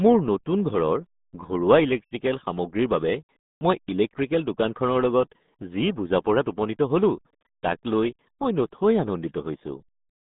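From start to finish the speech carries RealAudio 14.4 codec damage: nothing above about 3.8 kHz survives, leaving a narrow 150 Hz to 3.7 kHz band. Heavy low-rate coding, which fits RealAudio 1 at 8 kbit/s, makes the speech muffled and gargly.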